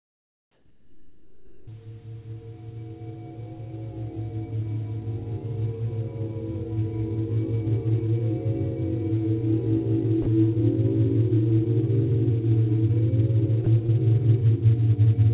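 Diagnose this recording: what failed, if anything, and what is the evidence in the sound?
From the start to 1.67 s the real background is replaced by a flat, featureless hiss, about 11 dB quieter than what follows. That's comfort noise in place of the background, likely the call processing's discontinuous transmission filling a pause with synthetic noise.

At 1.65 to 1.67 s the sound snaps in hard, with its first 20 ms missing. That's an onset clipped by the voice detector, likely because the sender's detector was slow to notice the sound returning, so comfort noise covered the beginning.

Two short sounds give way to steady noise: 10.22 to 10.26 s (40 ms) and 13.64 to 13.66 s (20 ms). That's sound dropped by the voice detector, likely the detector mistaking quiet sound for background and briefly stopping transmission before retriggering.

At 13.86 to 13.90 s there's a quick smear where 20 ms never reached the decoder in time. 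That's short concealed packet loss: the receiver extended the preceding sound to fill the hole, then blended back into the real audio, all within the telephone-band G.711 path that cuts everything above 4 kHz.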